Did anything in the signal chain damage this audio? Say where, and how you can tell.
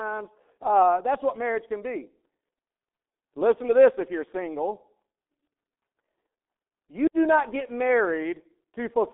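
Yes, at the codec stage: G.723.1 compression throughout leaves only 300 Hz to 3.6 kHz, fitting roughly 6.3 kbit/s. Its coarse, slow-updating model leaves speech muffled and hoarse, with smeared consonants.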